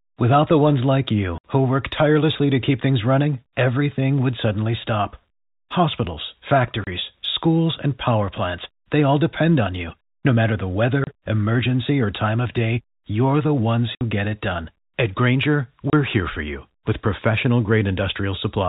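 Packet loss filled with silence breaks the speech five times: 1.38 to 1.44 s, 6.84 to 6.87 s, 11.04 to 11.07 s, 13.95 to 14.01 s and 15.9 to 15.93 s. Missing packets were replaced with silence, so each 30 or 60 ms hole, which fits 30 ms packets, cuts off abruptly with hard edges, within band-limited G.711 telephone sound.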